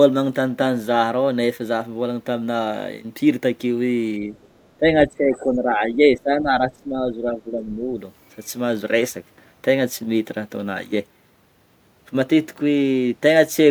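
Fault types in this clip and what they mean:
Speech suppressed in double talk: the voice dips slightly just after 4.2 s, then sinks much deeper, by roughly 15 dB, for about three seconds from 4.8 to 8.0 s. The likely cause is an echo canceller, confused by both sides talking at once, turning everything down.
Other side's voice leaking through: faint scraps of a second voice surface, very low from 4.41 to 4.69 s and somewhat louder but still quiet around 5.34 to 5.40 s. The likely cause is an echo canceller leaving some loudspeaker playback in the microphone signal.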